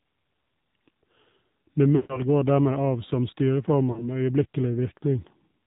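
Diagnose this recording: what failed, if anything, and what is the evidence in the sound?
Codec stage: AMR narrowband mobile codec damage throughout. The sound is buzzy and synthetic, fitting a low mode near 7.4 kbps, and the spectrogram cuts off flat at 4 kHz.

Network stage: lost AMR speech frames at 1.96 to 2.24 s and 3.92 to 4.05 s. Concealment repeats the last pitch, smearing harmonics horizontally, while the waveform envelope decays toward silence.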